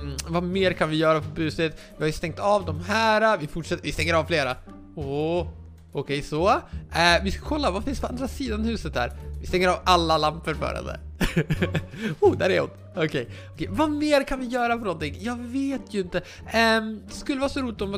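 No technical faults can be heard anywhere in the audio.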